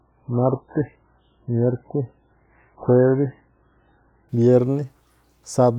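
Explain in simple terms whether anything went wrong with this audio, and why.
An adaptive stream starting at a low bitrate runs from the start until 4.29 s. The player begins on a cheap, low-quality copy so playback starts fast, leaving muffled, smeared speech with nothing above 3.8 kHz, then jumps cleanly to a much better copy.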